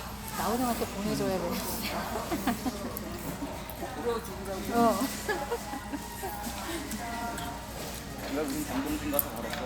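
No faults heard anywhere in the audio.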